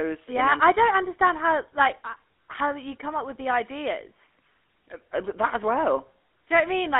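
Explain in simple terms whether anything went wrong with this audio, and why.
GSM full-rate codec, throughout: this old phone codec rebuilds the speech from a coarse buzz of pulses, adding gravelly roughness and cutting everything above 3.5 kHz.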